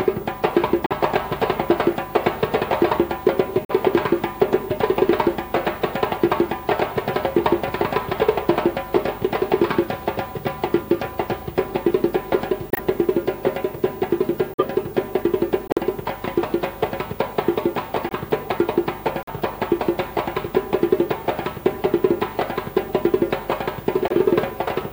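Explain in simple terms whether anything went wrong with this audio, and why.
Some of the compressed data was damaged, so the decoder rejected those chunks and the player filled each gap with silence. This corrupt frame muting causes sudden, brief dropouts at 0.86 s, 3.65 s, 12.71 s, 14.54 s, 15.68 s, 18.09 s, 19.23 s and 24.08 s. Each lasts roughly 40 to 110 ms. The sound cuts out abruptly, then carries on at the right time, so nothing drifts or falls out of sync.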